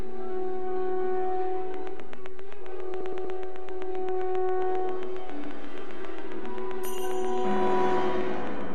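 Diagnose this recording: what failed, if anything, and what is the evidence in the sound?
The fault here is a DC offset, present across the whole clip. The waveform sits shifted off zero by a constant amount. You cannot hear it as a sound. It shows up as steady energy at the very bottom of the spectrum, and it eats into the available headroom. This points to the analogue input or converter stage, where a bias or a coupling problem lets a standing voltage through.

A train of clicks runs from 1.74 s to 8.62 s. The ticks come at a regular pace, about 7.5 per second. That is roughly fifty in all. Each tick has much the same shape and peaks around 10 dB above the surrounding sound. They carry on through quieter stretches too. The cause is likely interference from nearby equipment or a faulty connection or power supply. It is injecting a pulse on a steady clock.

The clip also has repeated frames, which is a codec, storage or network fault. 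At 3.00 to 3.36 s, a 120 ms block plays three extra times, adding 360 ms. At 5.45 to 5.52 s, a 72 ms block repeats once, adding 72 ms. At 7.56 to 7.59 s, a 24 ms block repeats once, adding 24 ms. Each is heard as a stutter. The block lengths fit 24 ms frames being written or sent more than once.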